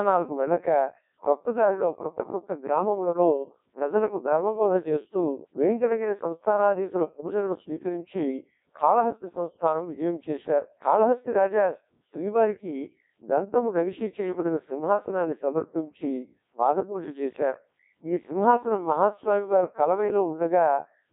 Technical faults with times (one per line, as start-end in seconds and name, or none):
0.00-21.13 Codec 2 vocoder